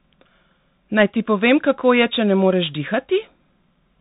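Throughout, the speech sounds boxed-in and scratchy, with a grainy hiss underneath, s sounds gritty and loud bright moments breaking up, and nothing above 3.8 kHz. This is the Bluetooth CVSD headset codec: one-bit up/down steps at 64 kbps whose adaptive step can't keep pace.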